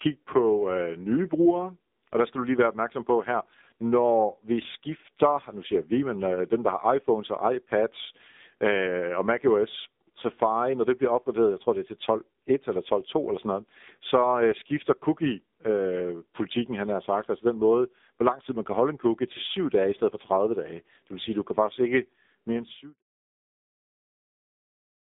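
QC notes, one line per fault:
Throughout: AMR narrowband mobile codec. Band runs 150 Hz to 3.7 kHz, nothing above 3.8 kHz. Heavy buzzy, synthetic speech fits AMR-NB at about 6.7 kbps.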